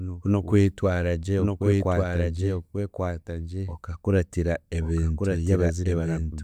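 Throughout the speech, a doubled audio track is heard: a second, full-band copy trails about a second behind, roughly 5 dB quieter. It most likely comes from a slower capture path or an out-of-step edit. Unlike a room echo, it keeps no decay or reverberant colour.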